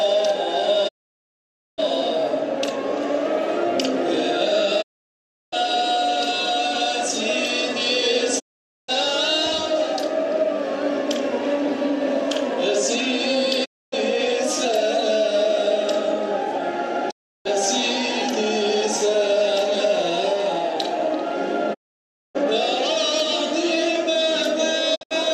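Digital broadcast dropout mutes the sound at 0.87–1.80, 4.81–5.54, 8.38–8.90, 13.64–13.94, 17.09–17.47, 21.73–22.37 and 24.94–25.15 s. Each time, failed frames force the receiver silent behind a 20 ms fade, leaving empty gaps in the waveform and spectrogram. The last gap breaks into short holes, none longer than 72 ms.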